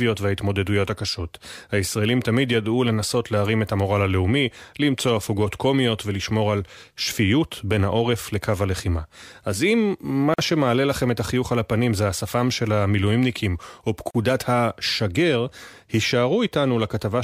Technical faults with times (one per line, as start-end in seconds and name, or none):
10.34-10.38 gap at a join of encoded pieces
14.11-14.15 gap at a join of encoded pieces